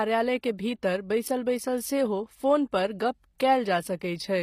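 From start to finish the speech carries plainly audible codec damage, likely HE-AAC compression at a low bitrate around 24 kbps. The treble is synthesised from copied lower bands, so s sounds come out gritty and lispy, and nothing is present above 15.5 kHz.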